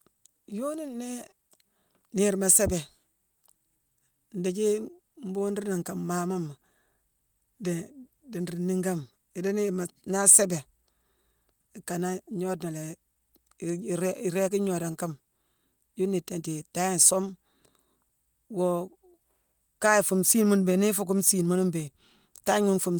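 Listening to the recording from beginning to end, nothing stood out as a technical problem at any point.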